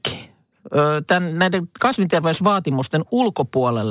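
Throughout the clip, the sample rate was lowered without an anti-aliasing filter, which fits a drop from 48 kHz to 8 kHz. Speech energy above 4 kHz folds back beneath that edge as aliasing, roughly 20 dB below the speech, leaving sibilants gritty and metallic.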